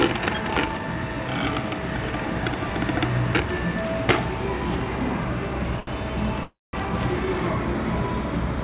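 At 5.80 s there's a short stall from a late packet. A packet missed its slot, the jitter buffer ran dry, and the receiver stretched the last bit of sound for about 70 ms until it showed up. Nothing is lost; the sound just hangs slightly too long with a slight buzz or dip until about 5.90 s.

From 6.43 to 6.76 s comes a call audio freeze, most likely packets held up in transit emptying the jitter buffer. The last sound carries on as a fading buzz or hiss and then drops to about 200 ms of silence. Playback resumes where it stopped, so roughly 300 ms of gap is inserted and nothing is lost. Through all of this the band tops out at 4 kHz, as expected from the G.711 call codec.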